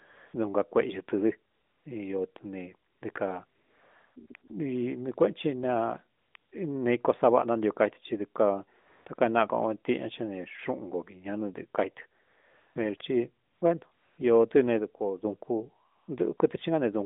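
Through the whole speech clip, from the opening at 0.0 s to about 16.4 s, the background keeps switching to a smooth, steady hiss and back. There are eighteen such stretches, from brief 20 ms flickers to a 700 ms patch at 3.46 to 4.16 s. This is AMR comfort noise: the phone judged those moments silent, stopped sending speech frames, and the receiver filled them with synthetic noise. The speech itself stays within the narrowband telephone range of about 200 Hz to 3.6 kHz.

From 14.79 s to 15.25 s, speech and background drop abruptly together by about 6 dB and then return, with no fade at either edge. This sudden gain jump likely comes from a digital level setting changing instantly between samples rather than being ramped.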